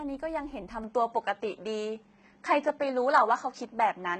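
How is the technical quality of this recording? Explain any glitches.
The quality is fairly rough: the whole clip carries heavy codec damage, and the sound shifts character early on.

For the full length, the treble in the speech has a gritty, metallic edge, and the s sounds come out lispy. That's likely HE-AAC compression. The codec only really encodes the lower band and fakes the top end by copying lower bands upward under a coarse envelope, so the harmonics up there don't line up. The damage here is heavy, which fits a very low bitrate, somewhere around 16 kbps.

From about 0.84 s to the end, the tone turns duller and boxier. There's no gap at the switch, but nothing survives above 8.1 kHz, the level moves by a few dB, and a faint new noise floor sits well below the speech. That pattern likely comes from the input being switched to a poorer device partway through, one with a narrower band and its own tone and noise.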